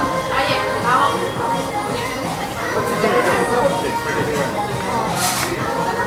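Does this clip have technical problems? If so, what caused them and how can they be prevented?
No, nothing in this recording points to a technical fault, so there is nothing to trace or prevent.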